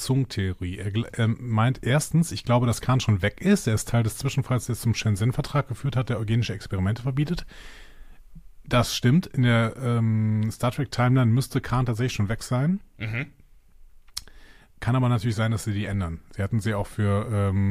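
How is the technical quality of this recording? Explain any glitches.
No glitches turn up anywhere in this one, so there's nothing to explain.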